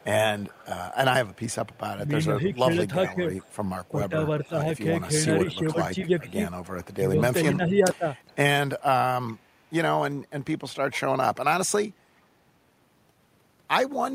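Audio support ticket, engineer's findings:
Echo leak. Far-end echo canceller likely not fully removing the loudspeaker pickup, so the residual is returned down the line. A delayed copy of the talker's own audio trails about 424 ms behind, faint, roughly 20 to 25 dB under the direct signal. Heard at 0.00–1.78 s, 2.47–4.79 s, 5.71–6.94 s, 7.93–8.36 s, 9.27–9.67 s and 10.91–10.98 s. Same fixed delay throughout, consistent with a single acoustic path.

Speech suppressed in double talk. Echo canceller's suppressor likely unable to separate the near talker from loudspeaker echo while both sides spoke at once, so it attenuated everything. The talker's level dips by around 10 dB in pieces at 2.29–3.20 s (roughly 0.4 s affected in total) and across 3.96–8.08 s (about a second affected). Dips overlap the echo leaks at 2.47–4.79 s and 5.71–6.94 s.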